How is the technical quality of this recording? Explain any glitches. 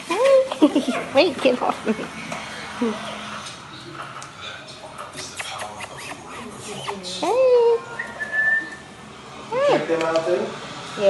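Nothing stood out on listening; there were no glitches to explain.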